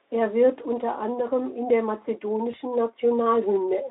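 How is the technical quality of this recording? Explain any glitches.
The recording has one brief glitch in the speech.

VoIP packet loss concealed by the speech codec occurs at 2.51 to 2.55 s. The gap fits a single lost 20 ms frame. The decoder filled it by repeating its last pitch and vocal-tract filter at reduced gain, so the speech briefly smears into a buzzy tone or a coloured noise that fades. Because the following frames rebuild from that guessed state, the voice stays weak until about 2.55 s. The narrowband Speex coding, limited to roughly 250 Hz to 3.7 kHz, can be heard around it.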